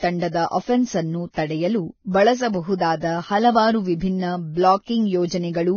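Throughout the speech, nothing above 6.6 kHz survives, and the remaining treble is hissy and grainy, which points to heavy, likely Vorbis compression at a very low rate, around 17 kbps. A spectrogram shows a flat ceiling at 6.6 kHz with speckled, noisy upper bands.

Pre-echo appears at 0.31–0.34 s, 2.78–2.80 s, 3.00–3.02 s and 4.85–4.87 s: quantisation noise meant for a sharp attack spreads back into the quiet moment before it. Each attack is preceded by a short hiss and sounds smeared, visible as a 21–27 ms noise smear ahead of the transient.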